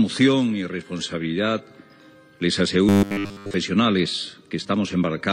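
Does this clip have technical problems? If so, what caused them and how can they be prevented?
Yes. From 2.89 to 3.54 s the sound collapses into robotic sound from repeated short buffers: a rigid, metallic buzz fixed at 100 Hz, which points to a 10 ms chunk being replayed over essentially the whole stretch, likely because fresh audio wasn't arriving in time. A longer stutter would be heard as repeated fragments, and a plain dropout as a gap, not this steady, pitched drone. Larger buffers or better scheduling of the audio thread would prevent it.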